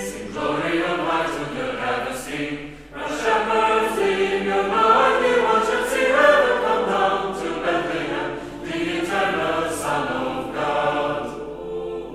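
From the first moment to the end, a steady low tone at 50 Hz sits under the sound: mains hum. The power line is coupling into the signal path, most plausibly through a ground loop or a transformer close to the cabling, so the 50 Hz supply frequency rides along with everything recorded. It stays roughly 25 dB below the wanted signal, quiet but constant.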